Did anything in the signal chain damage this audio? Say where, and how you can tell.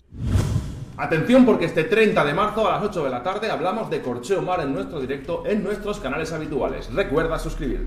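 No, nothing along the chain, from capture through to playback, leaves an audible mark on this audio.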